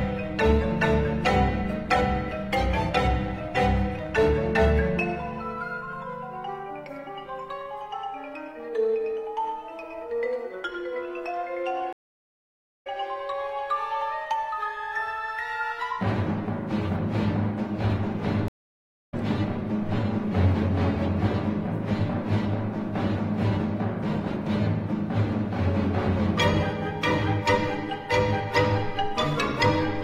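At 11.93 to 12.87 s, and again at 18.48 to 19.14 s, a stream reconnect occurs. The player drops out for about 0.9 s, then 0.6 s, and restarts decoding. The sound resumes roughly half a second, then 0.7 s, further on.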